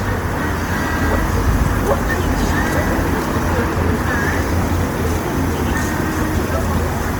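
Opus compression runs throughout this sound recording, likely from a low bitrate near 24 kbps in CELT mode: band-filling leaves tones grainy and rough, with full bandwidth to 20.2 kHz.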